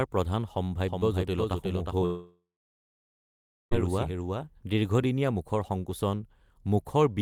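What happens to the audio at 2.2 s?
At 2.2 s the audio sits inside a long network dropout running from 2.05 s to 3.73 s. About 1.66 s of sound likely never arrived, and the receiver extended the last sound as a fading buzz or hiss before settling into near-silence for roughly 1.3 s. The speech then resumes without the missing stretch.

The same moment also falls within a doubled audio track spanning 0.88 s to 5.04 s. A full-band second copy trails by about 400 ms at roughly 5 dB down, likely from a second, slower capture path. It produces a dry, echo-like repeat with no room decay, starting and stopping abruptly.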